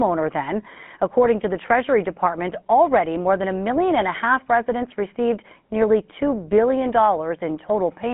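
GSM full-rate codec damage runs through the whole of this speech clip. The sound is confined to a telephone band of roughly 150 Hz to 3.4 kHz with nothing above 4 kHz, and it carries a plainly audible buzzy, gravelly roughness. That roughness comes from the codec rebuilding the voice from a vocal-tract model excited by coarsely spaced pulses, which fits a 13 kbps GSM full-rate stream.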